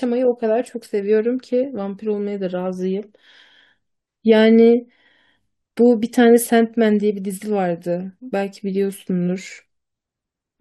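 A short recording of speech, with no technical faults to report. Nothing in it calls for a time, a value or a cause.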